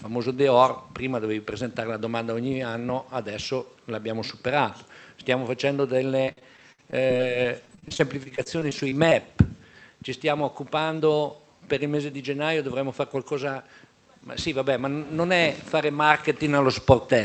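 From 6.25 s to 9.13 s there is repeated packet loss, giving a robotic sound. Over this stretch a dense run of dropouts, the longest about 57 ms, is each patched by stretching the last sound forward, so the audio turns choppy, with about 0.4 s lost outright. On a waveform the envelope breaks into short flattened, repetitive segments. A spectrogram shows smeared, horizontally streaked patches and small notches, all beneath the call path's band edge near 8 kHz.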